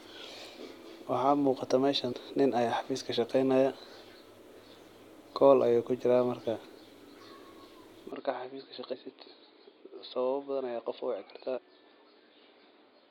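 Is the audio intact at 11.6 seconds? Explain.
No. Damaged data in a compressed stream hits from 11.57 to 11.59 s. Corrupted bytes there leave the decoder unable to parse those frames, so it loses sync and hunts for the next valid frame header. The result is a brief glitch lasting about 20 ms where the unreadable frames were dropped.

That moment also falls inside a longer stretch, from 8.12 s to the end of the clip, where the input likely switched to a poorer device. The change happens with no gap. From then on nothing above 4.9 kHz comes through, so the speech sounds duller and boxier. It is also a few decibels quieter, and a faint new background noise sits well below it.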